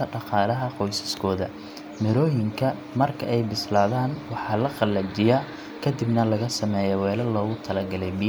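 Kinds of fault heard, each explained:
No technical faults can be heard in the recorded speech; the signal stays continuous and stable throughout, with no audible defects.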